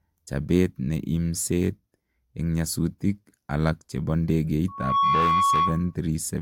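At 4.68 s, just after "en nyasutik alag chepo", a loudspeaker feedback squeal begins. A microphone is hearing its own loudspeaker, and the loop gain passes one at 1.1 kHz. The tone swells over roughly a third of a second, then rings above the speech until 5.95 s.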